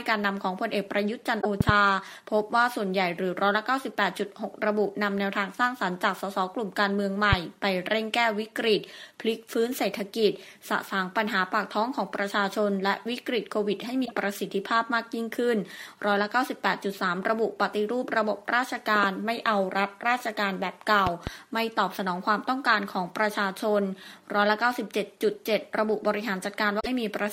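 Damaged data in a compressed stream comes first, at 1.37 to 1.46 s: the decoder misreads corrupted frames, loses sync and hunts for the next header, producing a brief glitch. Loud pops follow at 1.61 to 1.71 s (a double pop about 15 dB above the sound) and 7.33 to 7.35 s (a single pop about 20 dB above). A sudden voltage step, likely from a plug, switch or static discharge, is added to the signal and heard as sharp thumps while the sound continues underneath. The same stream damage recurs at 14.02 to 14.13 s as another glitch. A second double pop of about 15 dB sits at 21.07 to 21.30 s. A final corrupted stretch at 26.79 to 26.87 s gives one more short blip.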